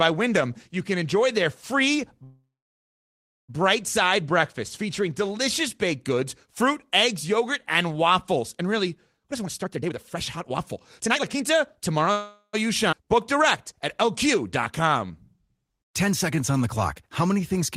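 At 2.23 s, right after "can enjoy their free", there is a call audio freeze lasting until 3.51 s. The last sound is briefly continued and then falls to about 1.02 s of silence. Speech resumes with "side breakfast featuring delicious" and nothing is lost, but the clip is now 1.25 s later. This likely comes from packets held up in transit, which let the jitter buffer run empty.

From 9.20 to 12.07 s a jitter buffer speed-up plays the speech at about 136% speed with its pitch unchanged. The receiver cuts out short pitch-period slices repeatedly, removing roughly a second in total, so the delivery sounds hurried.

A second freeze fills 12.12 to 12.55 s for 0.42 s, with only 50 ms of it silent.

At 12.91–12.94 s the audio skips ahead. Roughly 0.3 s of speech is dropped and the two sides are joined by an 11 ms fill, which is heard as an abrupt jump.

A jitter buffer slow-down runs from 13.05 to 16.63 s, ending before "the clock". 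It plays at 95% speed and adds 200 ms by repeating pitch periods, so sounds are slightly drawn out at the same pitch. A shorter slow-down follows at 17.27–17.59 s at 89% speed, adding 43 ms.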